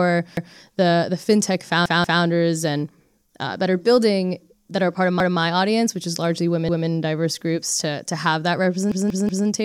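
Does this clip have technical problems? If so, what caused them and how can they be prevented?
Yes. Repeated buffers stutter the speech at 0.37, 1.86, 5.20, 6.69 and 8.92 s. A 186 ms piece, which fits an 8192-sample buffer, replays with hard joins: twice at 1.86 s, three times at 8.92 s, otherwise once. Unlike a dropout, nothing falls silent. Deeper playback buffering prevents it.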